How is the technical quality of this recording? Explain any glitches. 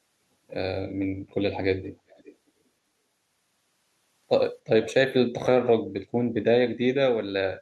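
Two brief glitches stand out, both echo leak. From 2.09 to 2.35 s and again from 4.82 to 4.94 s, a faint copy of the speech returns 387 ms late. It sits about 20 to 25 dB below the speech and sounds like a short scrap. The likely cause is a loudspeaker at the other end whose echo canceller let part of its microphone pickup slip back.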